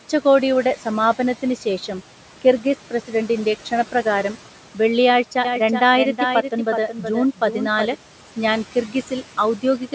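Throughout the speech, noise suppressor artifacts are audible: the suppressor pulls the background down by about 12 dB in the gaps and lets it rise under the speech.

From 5.45 s to 7.95 s, just after "കിർഗിസ് പ്രസിഡന്റിൻ്റെ ക്ഷണപ്രകാരം വെള്ളിയാഴ്ച", a doubled audio track appears. A dry, full-band copy trails the original by roughly 400 ms at about 5 dB lower, starting and stopping abruptly. The likely cause is a second, slower capture path being mixed in.

Between 8.72 s and 8.95 s, speech is cut by the noise suppressor. Across about 100 ms in total, it mistakes soft speech for background and drops it by up to about 10 dB, so those sounds come across swallowed and faint.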